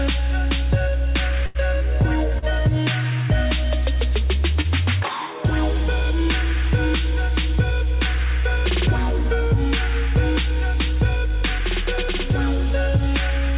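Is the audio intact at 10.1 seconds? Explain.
Yes, the audio is intact at 10.1 seconds, with no dropout or glitch, only the steady telephone-band sound, with nothing above 4 kHz, that fits a narrowband call codec such as G.711 mu-law.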